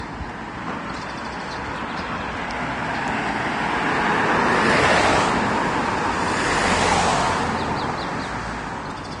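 Everyday sound that is low-bitrate audio saved at a high bitrate throughout: nothing exists above 10.6 kHz, a flat shelf on a spectrogram, which points to a very low first encoding, likely near 32 kbit/s, later wrapped in a roomy MP3 that restores nothing.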